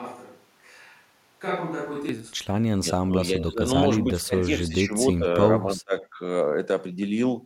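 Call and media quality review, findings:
Switch to a distant microphone, 0 to 2.09 s, already present at start: roomy, hollow speech, thin low end, level about 5 dB down, room noise roughly 30 dB under speech. Likely close-mic signal lost.

Speech suppressed in double talk at 2.78 to 2.88 s, 3.06 to 4.94 s, 5.1 to 5.42 s and 5.64 to 6.19 s: speech dips or chops, up to about 30 dB down. Likely echo canceller attenuating during overlap.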